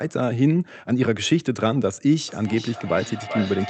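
From 2.28 s to the end, a feedback echo between two devices brings the speech back roughly every 400 ms, about 10 dB below it. Unlike a room reflection, the fixed-interval repeats sound thinner and more ringing with each pass.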